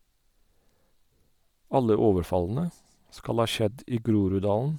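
From start to finish, the speech carries Bluetooth LC3 compression damage, plainly audible. The upper spectrum has been stripped and refilled with synthetic noise. This gives a breathy, grainy edge. The sound points to 10 ms frames, which fits a likely 48 kbps LC3 link.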